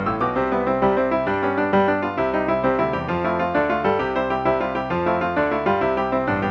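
No audible technical fault turns up anywhere in the audio. The sound holds steady throughout, with nothing that calls for correction.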